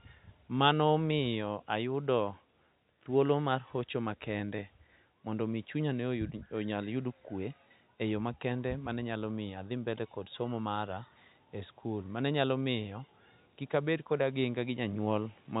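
No technical faults can be heard in this speech.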